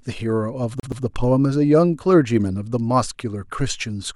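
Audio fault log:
0.80–1.04 s: CD stuck on one turn. A 123 ms slice of speech plays twice with a brief mute at each jump, an evenly timed stutter unlike random dropout glitches.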